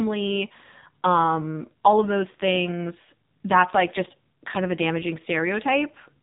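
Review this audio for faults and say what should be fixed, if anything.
Throughout the whole recording the speech carries the AMR narrowband mobile codec. The codec rebuilds the voice from a vocal-tract model driven by sparse pulses, and here the damage is heavy. It sounds buzzy and synthetic, which points to a low mode of around 5.9 kbps. On a spectrogram, energy stops dead near 3.8 kHz with an empty band above, and harmonics look smeared and blocky in 20 ms steps. To prevent it, capture or route the call over a wideband path, or raise the codec mode, before recording.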